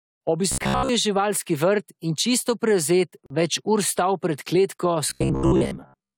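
From 0.52 to 0.89 s, and again from 5.10 s to the end at 6.18 s, the speech takes on robotic sound from repeated short buffers, a rigid metallic buzz near 66.7 Hz. The likely cause is starved playback repeating a 15 ms buffer, replacing most of the real audio.

At 3.26 to 3.30 s, a gap between stream segments cuts in as a hard-edged silence of about 40 ms. Timestamps between 2.0 s segments fail to meet, and the player pads the hole with silence without dropping any audio.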